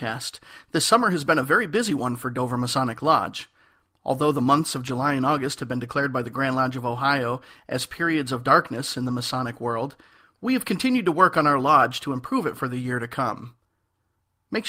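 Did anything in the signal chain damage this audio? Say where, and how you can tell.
Yes. The damage is at the network stage, as lost packet rebuilt from error correction. There are two brief rough patches with no gap. One runs from 4.87 to 4.89 s, just after "the months of", and lasts about 20 ms. The other runs from 9.07 to 9.13 s, just after "periods of darkness in", and covers about 40 ms. That points to one lost packet, then two. Each was replaced by a low-bitrate copy carried in the following packet, so it plays grainier and noisier.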